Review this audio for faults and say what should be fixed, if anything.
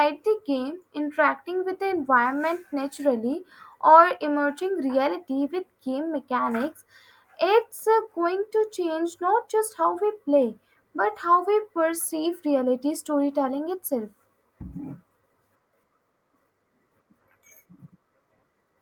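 No faults; nothing to fix.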